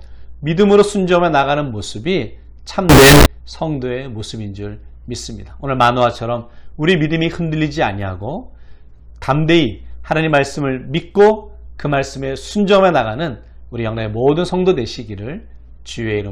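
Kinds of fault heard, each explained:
Float read as integer: From 2.89 to 3.26 s the audio turns into a very loud, harsh, buzzing block of sound. The waveform looks nearly square and sits at an almost fixed, high level. Quiet background noise jumps to the same level as the main sound. Pitch can still be traced through it. The likely cause is 32-bit floating-point samples being read as 32-bit integers. The sign and exponent bits then decide each sample's size, not the actual signal level.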